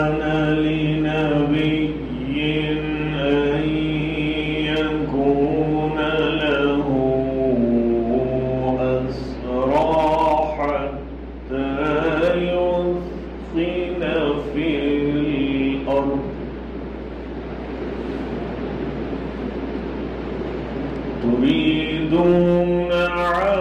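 A steady low 60 Hz tone with some low harmonics sits under the sound from start to finish: mains hum, from a ground loop or nearby transformer, fairly loud.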